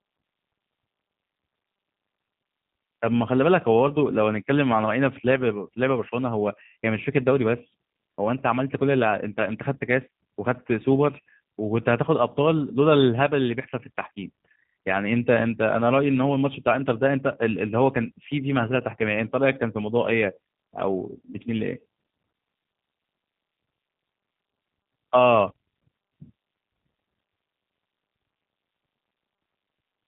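Throughout, the speech has passed through the G.729 codec, most consistent with G.729A at around 8 kbit/s. Each 10 ms frame is rebuilt from a vocal tract model, pitch predictor and sparse pulses, with nothing above 4 kHz, leaving the speech plainly dull, rough and synthetic.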